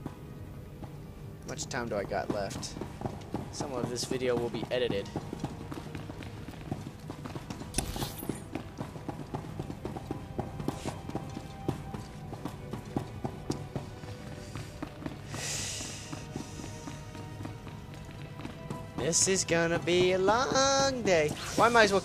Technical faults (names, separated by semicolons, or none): none